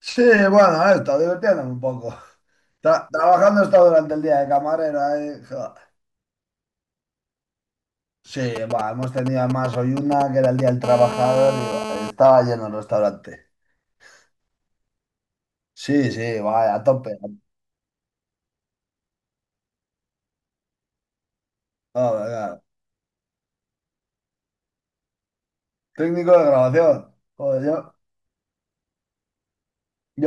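From 8.56 to 10.69 s, GSM signalling bursts break in: a galloping dit-dit-dit of short raspy buzzes, around 10 dB below the speech. A nearby 2G phone is exchanging signalling with the network, sending only brief clusters of radio bursts, and the audio circuitry rectifies each burst into sound. Unlike a continuous hum, the interference arrives in irregular groups, and each short buzz inside a group carries the same 217 Hz repetition.

At 10.84 s it becomes a steady GSM phone buzz that runs until 12.11 s, about 9 dB below the speech. The phone has moved into a call and now transmits bursts continuously at 217 Hz. Rectified, that train of pulses gives a hard, rasping tone rich in harmonics that bears no relation to the speech. What sets it apart from the earlier bursts is its continuity: there is no galloping pattern or gaps, just an unbroken buzz.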